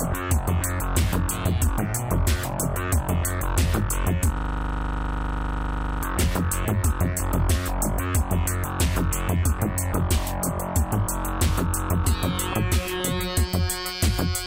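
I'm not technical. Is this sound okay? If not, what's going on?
No. From 4.38 to 6.03 s there's a system hang loop. The computer briefly froze while the sound hardware kept replaying the same 40 ms scrap of audio, 41 times at 25 per second. Unlike a dropout, nothing goes silent. One identical tiny piece repeats.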